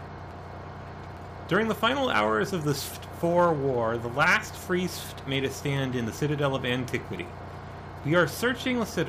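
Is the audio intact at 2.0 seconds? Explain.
Yes, the audio is intact at 2.0 seconds, with no dropout, click, distortion or other fault at that point.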